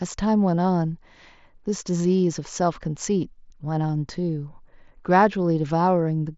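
No technical faults can be heard in this speech. It carries the sound of a working Bluetooth mSBC headset link, with nothing above about 7.7 kHz and only the light coding texture that wideband headset codec leaves.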